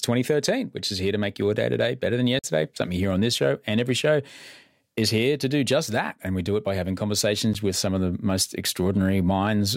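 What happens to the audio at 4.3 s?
Nothing goes wrong at 4.3 s; the speech there plays through intact.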